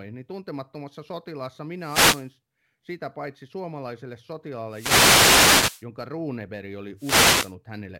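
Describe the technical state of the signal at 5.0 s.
The analogue FM wireless link is fading from multipath cancellation, a wireless microphone noise hit from 4.68 to 5.86 s after "sitä paitsi suomalaiselle", so receiver noise surges as static over the speech.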